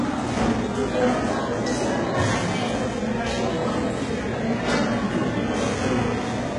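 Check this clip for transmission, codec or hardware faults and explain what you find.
HE-AAC compression is the fault, running through the whole clip. The treble sounds false: upper detail comes across gritty and metallic, and nothing is left above about 11 kHz. The likely cause is heavy HE-AAC coding at a very low rate, which fits something around 12 kbps. The codec spends its bits on the lower spectrum and rebuilds the top by copying lower bands upward under a coarse envelope, so the upper harmonics no longer match the sound beneath them.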